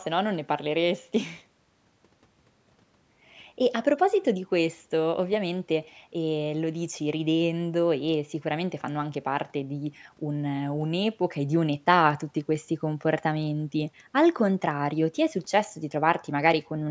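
No technical faults are audible.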